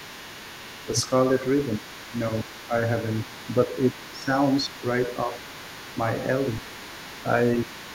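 From the start to the end, a second, fainter voice sits under the main talker at roughly 20 dB down: other side's voice leaking through. It is likely far-end audio from the talker's loudspeaker that the echo canceller failed to fully remove from the microphone. On a spectrogram it appears as a weak, separate set of harmonics and formants that never lines up with the main speech, and it stays visible in the pauses.

Speech suppressed in double talk breaks into the talker's voice five times: 0.85 to 1.11 s, 1.78 to 2.74 s, 3.66 to 4.28 s, 4.62 to 4.74 s, and 7.64 s to the end. The likely cause is that the canceller couldn't tell the near talker from the echo while both were active, so it pulled the level down. The first and fourth dips are slight, the second is about 10 dB, the third about 15 dB, and the last about 20 dB. Each dip shows as a sudden narrowing of the waveform envelope and a dimmer band on the spectrogram.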